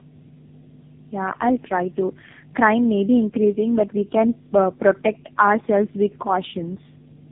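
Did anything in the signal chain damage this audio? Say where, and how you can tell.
Yes. In the analogue wiring, a steady 50 Hz mains hum runs under the speech for the whole clip, with a few low harmonics. It sits high, only about 10 dB below the speech, so it fills every pause. A constant tone locked to the power-line frequency points to a ground loop or a nearby transformer coupling mains current into the signal path before it was digitised.

In the call processing, tandem speech coding roughens, muffles and warbles the speech throughout, and nothing reaches above 3.7 kHz. The smeared consonants and unstable vowel texture are beyond what one narrowband codec produces. They fit three speech codecs in a row, likely AMR-NB at each end with a GSM full-rate link between. Each decode and re-encode compounds the previous coder's errors.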